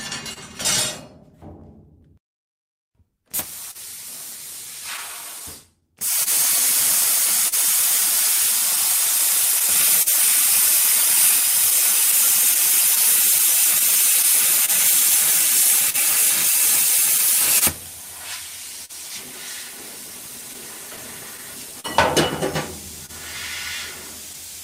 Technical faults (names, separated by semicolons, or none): clock drift between sender and receiver; scattered short gaps